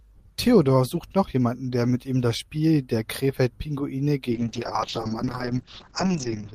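From 4.33 s to the end, a call bitrate drop from 32 to 6 kbps narrows the band from 20 kHz to 8 kHz. The speech turns coarse and muffled, not clipped or gapped like packet loss.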